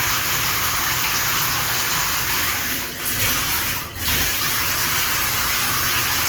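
An adaptive stream dropped to a lower bitrate from 2.91 s to the end of this recording of sounds, likely after the connection slowed. The quality changes abruptly with no gap: codec artefacts rise, which fits a step from about 64 kbit/s Opus to roughly 16 kbit/s.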